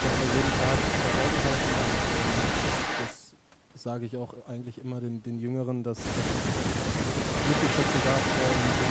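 A speech clip that's come through a call path, band-limited with nothing above 8 kHz and with Opus coding that sounds like roughly 32 kbps. From 0.0 to 3.19 s and again from 7.3 s to the end at 8.9 s there's an echo leak: a second copy of the speech trails the original by 237 ms at about the same loudness, most likely because a far-end loudspeaker fed back into the microphone and the echo canceller didn't remove it. Between 6.37 and 6.57 s the speech dips by about 5 dB for around a tenth of a second, which is speech suppressed in double talk, likely the canceller turning down this talker while the other side was speaking too.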